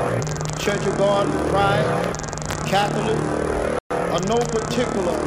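At 3.79 s the audio drops abruptly to silence for about 0.12 s, then resumes at 3.91 s with no fade in or out on either side, like playback being held and released. This gap is likely a Bluetooth stall: radio interference delayed packets on the wireless link, the headphones' small receive buffer emptied, and output halted until the retransmitted data arrived and refilled it enough for playback to restart.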